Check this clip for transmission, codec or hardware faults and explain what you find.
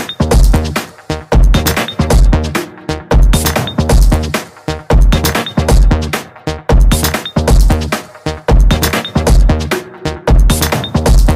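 One fault is present: hard clipping, running through the whole clip. Some stage in the chain was driven about 7 dB past the largest value it could pass, so every peak that exceeded that ceiling was sliced off flat, around a tenth of the waveform in all. Those squared-off tops generate harmonics reaching well up the spectrum, which is heard as a harsh fuzz riding on every loud moment from start to finish.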